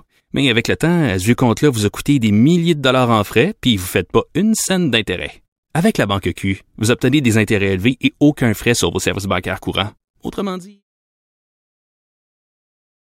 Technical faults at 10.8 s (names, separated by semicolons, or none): none